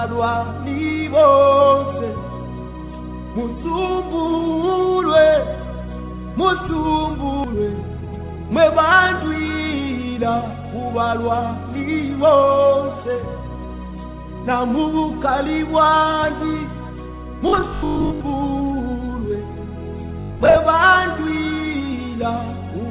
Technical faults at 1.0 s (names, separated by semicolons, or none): none